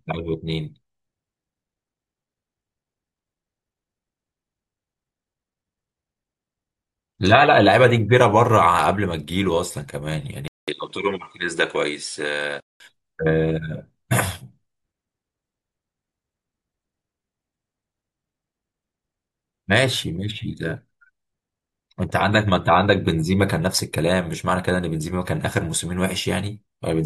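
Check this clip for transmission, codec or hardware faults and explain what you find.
One fault stands out: an input switched to a poorer device. From 10.48 to 12.80 s the sound changes character. A short gap of about 200 ms marks the switch. The sound then loses everything above 10.5 kHz and drops a few decibels in level. A new noise floor appears, roughly 40 dB below the signal. The likely cause is a change of microphone, with a narrower band and its own background noise. The sound turns duller.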